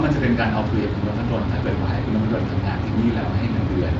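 No technical faults can be heard in this speech clip. The Speex coding leaves only light traces, and the band stops at about 7.7 kHz.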